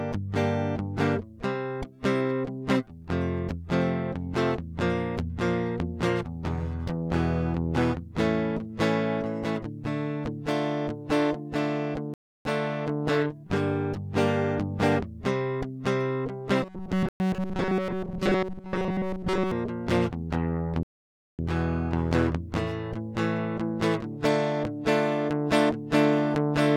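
The clip is music, and it drops out completely three times: from 12.14 to 12.45 s for about 313 ms, from 17.09 to 17.20 s for about 114 ms, and from 20.83 to 21.39 s for about 556 ms. Each time the sound resumes after the gap. These are likely Bluetooth stalls, where radio interference delays packets, the headphone buffer empties, and playback halts until retransmitted data arrives. From 16.63 to 19.51 s the music becomes a rigid, metallic buzz fixed at 188 Hz that only loosely tracks the original. Essentially the whole stretch is made of repeats, and the shorter dropout at 17.09 s falls inside it. This is robotic sound from repeated short buffers, likely caused by audio arriving too infrequently, so the playback software loops the most recent fragment in place of the missing material. A 188 Hz repetition rate fits a looped buffer of roughly 5.3 ms.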